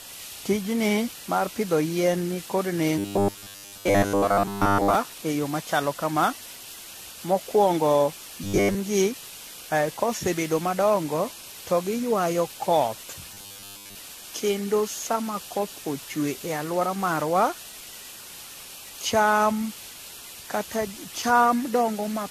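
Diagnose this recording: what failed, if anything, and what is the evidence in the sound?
A low bit depth with dither fault at the sample-format conversion stage runs through the whole recording. A constant, even hiss sits under the speech at about 15 dB below the signal level, with no grainy distortion riding on the speech itself. That points to the audio having been reduced to 6 bits with dither added before rounding. The dither turns what would be signal-dependent quantisation distortion into a steady, uncorrelated noise floor.

The codec stage shows generation loss throughout. The speech sounds swirly, hollow and smeared, with consonant onsets blurred more than a single moderate-rate AAC-LC encode would account for. The likely cause is repeated decoding and re-encoding, on the order of seven passes at 64 kbit/s. Each pass quantises again on a shifted frame grid, so noise and spectral holes accumulate.

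At the driver or buffer stage there is robotic sound from repeated short buffers in three places: 2.98 to 4.95 s, between "pidho yien ni kod" and "e yo machalo kama"; 8.44 to 8.76 s; and 13.34 to 13.96 s, right after "madongo to giywayo koth". The speech becomes a rigid, metallic buzz fixed at 100 Hz. That fits a 10 ms block being replayed while most of the real audio is skipped. The likely cause is fresh audio arriving too seldom to fill the output.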